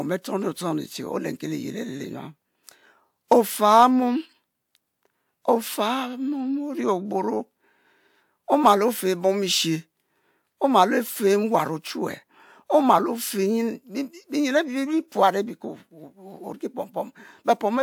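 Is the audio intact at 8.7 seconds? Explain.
Yes, the audio is intact at 8.7 seconds, with the speech continuing there without any audible dropout, distortion or other fault.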